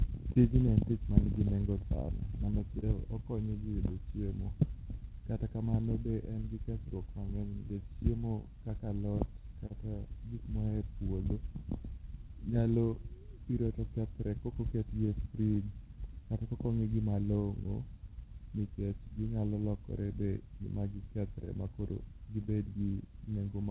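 Clock drift between sender and receiver runs through the whole speech clip. The sender's clock is about 2% slower than the receiver's, so the jitter buffer keeps draining. On a waveform the syllable spacing slowly stretches against real time, and the narrowband spectrogram, empty above 4 kHz as a G.711-style call path would leave it, shows faint irregular seams.

Repeated timing corrections follow from that drift, from 0.05 s to 23.51 s. The receiver repeatedly stretches the audio, running at about 99% speed and adding roughly 0.3 s overall. The edits are unevenly spaced and sound like slight hiccups or a sluggish, wavering tempo. A waveform shows duplicated pitch-period-length stretches, and a spectrogram shows briefly elongated harmonics.

Scattered short gaps appear in three clusters. Between 0.32 s and 2.84 s there are about four gaps, the longest around 30 ms. Between 7.69 s and 9.72 s there are about three, again up to around 30 ms. 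Between 15.06 s and 16.06 s there are about three tiny ones of up to roughly 10 ms. Each lost or late packet was patched by continuing the previous sound, so they come across as brief ticks or smears. In a spectrogram they show as short frozen or blurred slivers, and in a waveform as repeated cycles with a small discontinuity at the join.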